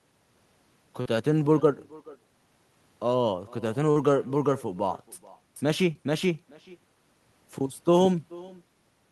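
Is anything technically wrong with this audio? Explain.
Yes. Three faults are present in this speech.

Echo with no canceller runs throughout: the far end's loudspeaker feeds its microphone and nothing removes it, so every phrase returns roughly 0.4 s later, about 23 dB down, as a faint, thin shadow trailing the talker.

Short concealed packet loss occurs at 1.01 s, 3.91 s and 5.93 s. Packets arrived too late, so the receiver extended the preceding sound for about 40 ms at the first two and 15 ms at the third, leaving brief smears or wobbles where a consonant may drop.

A doubled audio track appears from 5.56 s to 8.06 s, likely from a second, slower capture path mixing in the same signal. A full-band copy at about equal loudness follows roughly 0.4 s behind, dry and uncoloured, switching on and off abruptly at both ends.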